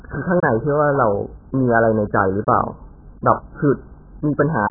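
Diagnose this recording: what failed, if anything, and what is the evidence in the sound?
The failure is at the codec stage, and it runs through the whole speech clip. Nothing survives above 1.8 kHz, so the sound is dull and boxy from start to finish. The damage is heavy. Sustained sounds and sibilants smear and warble. The cause is likely AAC compression, in AAC-LC form, at a bitrate that sounds near 8 kbps. At that rate the encoder drops the top band entirely. It quantises the remaining frequency lines so coarsely that the spectrum breaks up.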